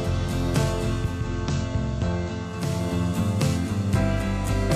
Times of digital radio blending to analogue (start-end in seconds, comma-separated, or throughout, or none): 0.92-2.84